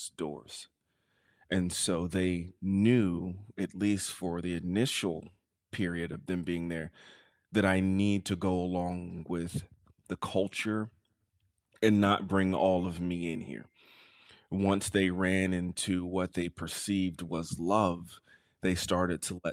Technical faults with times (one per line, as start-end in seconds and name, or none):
none